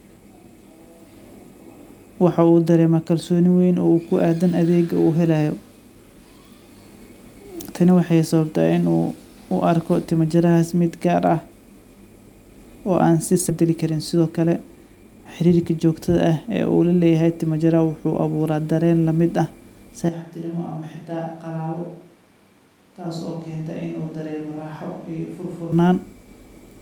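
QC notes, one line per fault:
13.5 s: skip ahead, roughly 0.7 s of speech dropped and both sides spliced directly; waveform shows an abrupt joint with no silent gap.
13.61–15.85 s: jitter buffer speed-up, speech runs about 8% fast at unchanged pitch as short pitch-period pieces are removed; spectrogram harmonics stay level while syllables compress.
20.09–25.72 s: switch to a distant microphone, sound turns sudden roomy and hollow, about 10 dB quieter with noise near 30 dB below; likely the close mic dropped out, spectrogram shows thinned lows and a raised floor.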